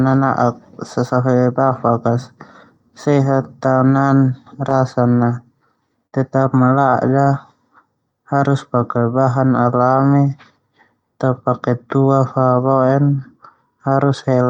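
At 6.07 s the speech hits a burst of packet loss lasting until about 6.15 s. Several consecutive packets never arrived in time, so the receiver extended the last sound it had for about 55 ms while fading it down. The result is a brief held buzz or fading hiss rather than silence. Speech then resumes with roughly 60 ms skipped. That concealment tail before the jump distinguishes it from a plain dropout, which would cut to dead silence.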